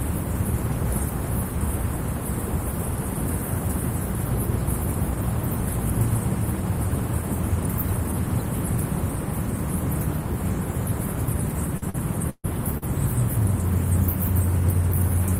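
A recording of everyday sounds, with repeated packet loss (robotic sound) from 11.77 to 12.84 s. Four gaps, the longest 139 ms, are patched by stretching the preceding audio, so about a quarter of that stretch is concealed and it sounds choppy. On a spectrogram, those patches appear as smeared, repeated bands with abrupt edges.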